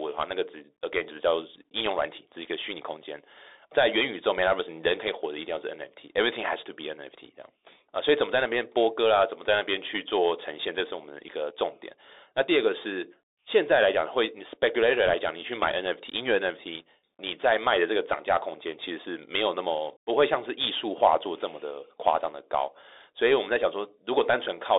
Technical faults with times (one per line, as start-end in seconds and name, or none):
0.00-24.78 Bluetooth CVSD headset codec
15.06-15.14 bit errors on a Bluetooth voice link